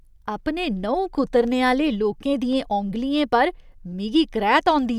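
From 2.53 to 2.90 s, three CD scratch ticks fall at an even spacing of about five per second, each no longer than a millisecond. A blemish on the disc overwhelms error correction once per rotation. Their steady rhythm sets them apart from random digital clicks.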